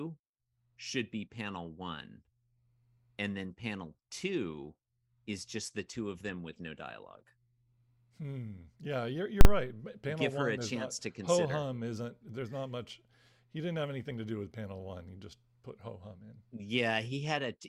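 At 9.41 s the speech is hit by a single violent bang lasting until 9.45 s. This is invalid numbers at full scale: a calculation produced infinite or undefined values that were forced to the maximum sample level, holding the output pinned for a 40 ms block.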